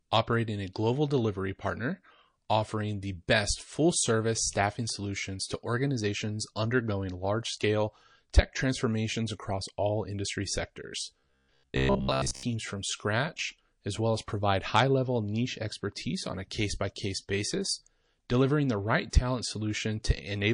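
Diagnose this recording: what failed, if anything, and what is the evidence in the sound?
Throughout the speech the treble is dulled and watery, which points to likely damage at the codec stage from MP3 compression, at a bitrate around 40 kbps.

From 11.2 to 12.43 s the sound becomes a rigid metallic buzz at 66.7 Hz. This is likely robotic sound from repeated short buffers: the driver or buffer stage replayed about 15 ms chunks for most of that stretch.

From 19.1 to 19.13 s a hiss about 12 dB up precedes an attack by 33 ms. This is pre-echo at the codec stage, where a 52 ms transform window without short blocks smeared the attack forward.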